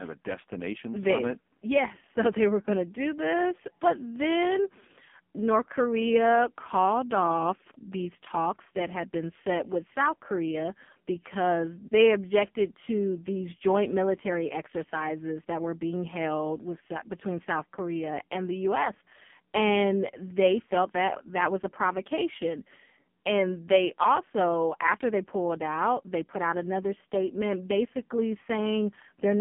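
From start to finish the speech sounds buzzy, muffled and synthetic, with nothing above 3.4 kHz and little below 150 Hz. This is heavy AMR narrowband mobile codec damage: the phone-line band and coarse vocal-tract modelling fit AMR-NB's low mode near 5 kbps.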